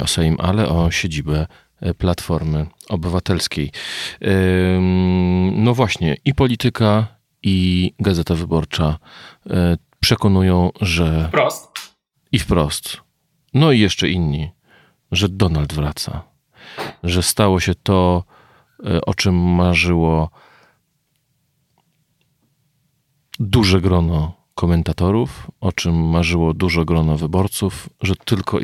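Listening to this speech recording, nothing stood out as a technical problem at any point.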